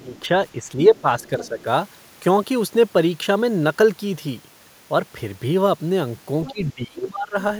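From 0.0 to 0.35 s and 0.54 to 1.67 s, speech dips, by up to roughly 15 dB, then about 10 dB. This is likely speech suppressed in double talk, the echo canceller ducking both voices. From 1.21 to 1.63 s, the other side's voice leaking through, far below the speech, is likely residual loudspeaker echo. It returns faintly near 6.5 s. Heavier suppression, roughly 20 dB deep, likely follows from 6.47 to 7.37 s.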